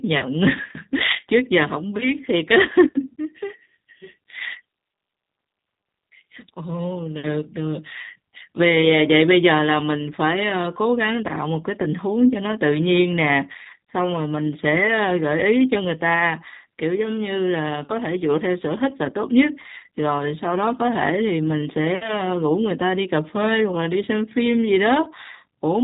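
From start to finish the speech carries the signature of the G.729 codec, and the damage is plainly audible. Everything above 4 kHz is gone, so it sounds narrow and phone-like, and the voice has that slightly rough, synthetic edge you get when speech is rebuilt from a vocal tract model and a handful of pulses per frame. That low-bitrate character fits an 8 kbit/s G.729A encode.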